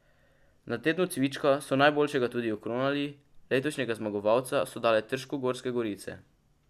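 Nothing in the recording stood out as a problem on listening.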